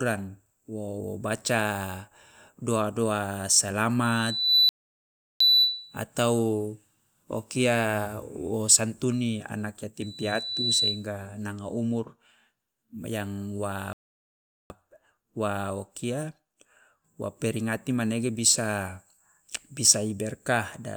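Speech with two kinds of fault. A loudspeaker feedback squeal appears from 4.03 to 6.03 s and from 10.01 to 11.07 s: a single 4 kHz tone that swells over roughly half a second and then 0.7 s to above the speech, about 10 dB and then about 5 dB. That growth is the mic-to-speaker loop running away, unlike a fixed whistle or hum. Playback stalls silence everything from 4.69 to 5.40 s, inside the first squeal, and from 13.93 to 14.70 s, about 0.71 s and 0.77 s. These are far longer than a click-like dropout, likely from the player being starved of data.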